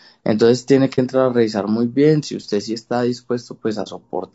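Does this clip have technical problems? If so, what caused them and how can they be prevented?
Yes. The speech throughout sounds rough and grainy, with noise filling the gaps between pitch harmonics and a thin, synthetic top band. This is likely low-delay AAC compression such as AAC-ELD, and it fits a bitrate around 32 kbps. Its short frames resolve harmonics poorly, and that graininess separates it from the warbling of longer-frame codecs. Raising the bitrate prevents it.

AAC frame loss with muting occurs at 0.95 to 0.99 s and 3.83 to 3.88 s. Each time a frame of about 30 ms goes missing and the decoder silences it. Overlapping windows fade the sound out and back in, leaving a brief dip, which sets it apart from a hard dropout. Error concealment or a more reliable network prevents it.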